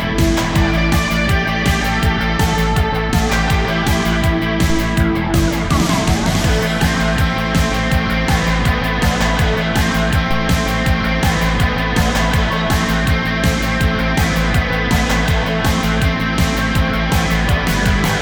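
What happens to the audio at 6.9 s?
Nothing goes wrong at 6.9 s: the audio plays straight through that moment with no dropout, click, glitch or other technical fault.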